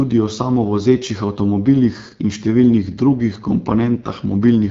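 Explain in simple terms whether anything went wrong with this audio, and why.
The speech has been squeezed through the AMR wideband (HD Voice) codec, the system used for HD calls on mobile networks, and the damage is plainly audible from start to finish. The codec rebuilds the voice from a simplified model of the throat and mouth, and here it runs at one of its lowest settings, so the speech comes out rough and raspy. Nothing above about 7.5 kHz survives, which takes away some crispness.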